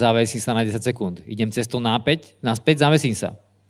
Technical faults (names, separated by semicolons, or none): none